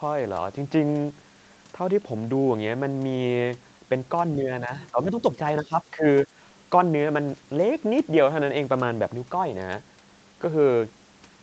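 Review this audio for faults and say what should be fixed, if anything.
There's a brief, faint scrap of the other side's voice leaking through from 4.82 to 4.87 s, sitting roughly 25 dB under the speech. That's likely loudspeaker playback reaching the microphone and slipping past an echo canceller that didn't fully converge. Better acoustic isolation or a longer, properly tuned echo-canceller filter would keep it out.

Right after that, the speech is suppressed in double talk at 4.92 to 5.24 s, 5.62 to 5.73 s and 5.91 to 6.05 s. The talker dips by around 10 dB in short bites while the far end is active, likely because the canceller can't separate the two and turns everything down. A double-talk detector that holds off suppression when the near-end talker is clearly present would prevent this.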